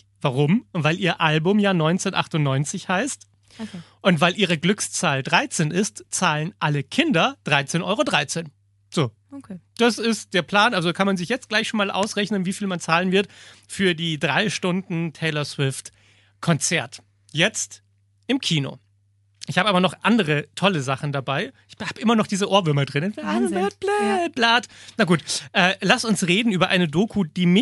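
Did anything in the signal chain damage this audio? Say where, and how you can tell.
No, nothing along the way seems to have hurt this recording; the speech comes through intact with nothing I'd trace back to any stage of the chain.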